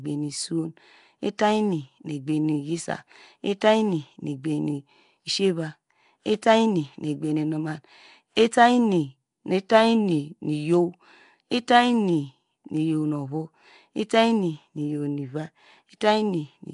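A rough, hissy halo and smeared, underwater quality run through the whole speech, with nothing above 10.6 kHz, likely from Nellymoser compression at a low fixed bit budget. At 1.38 s, a hiss of about 11 ms leads into a sharp attack that sounds softened. This is pre-echo: the codec spread noise sized for the loud onset across its whole block, including the quiet moment before it.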